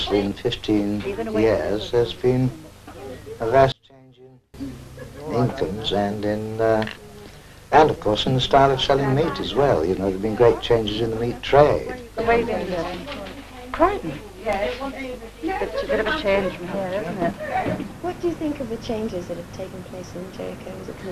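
From 3.72 to 4.54 s all sound sinks about 30 dB, likely one channel inverted cancelling in mono; unlike a dropout, a faint residue remains.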